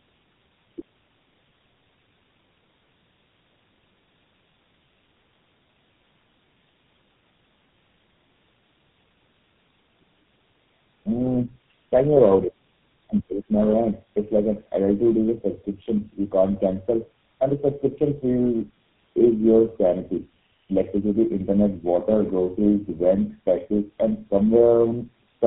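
Tandem speech coding runs through the whole speech clip: it was decoded and re-encoded across roughly three low-rate speech codecs, which makes it rough, muffled and warbly, with nothing above 3.8 kHz.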